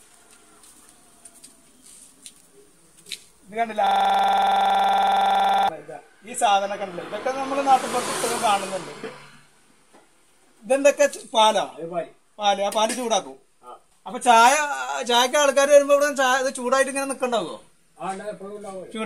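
At 3.87 s the sound locks up into a system hang loop that runs until 5.69 s. The machine or its driver stalled, but the audio hardware kept replaying the same chunk of its ring buffer, so one 46.4 ms slice repeats about 40 times. At a 21.5 Hz repeat rate you hear a harsh, rattling stutter that sits right on the edge of a buzz. That slice length fits a 2048-sample buffer.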